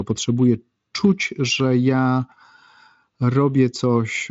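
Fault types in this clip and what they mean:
Nothing here stands out as a fault.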